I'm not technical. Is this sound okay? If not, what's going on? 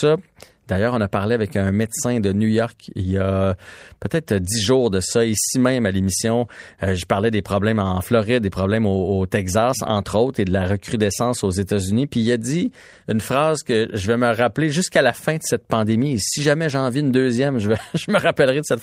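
Yes, no technical faults turn up anywhere in this speech recording.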